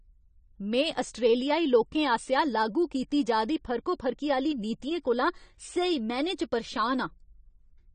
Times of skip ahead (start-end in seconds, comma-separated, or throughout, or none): none